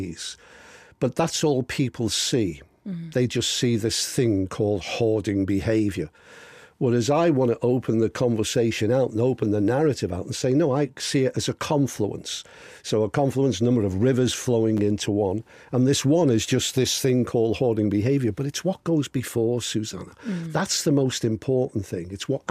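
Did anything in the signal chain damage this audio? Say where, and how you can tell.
Yes. At 14.77 to 14.79 s, the buffer stage delivered chunks out of order. A 10 ms chunk played one chunk late, causing a brief jumbled moment.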